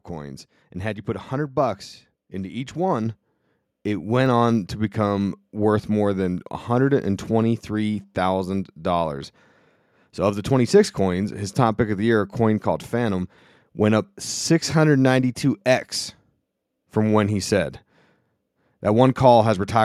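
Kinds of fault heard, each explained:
Microphone volume stepped up: after "bucks into each", at 3.06 s, voice and background jump about 4 dB together in one step, unlike a gradual ramp.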